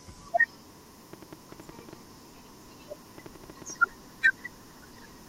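From 1.13 to 3.71 s there's a train of clicks, around fifteen sharp pops at roughly six per second, unevenly spaced and poking a little above the speech, gaps included. It's likely interference from nearby gear or a faulty connection or power supply.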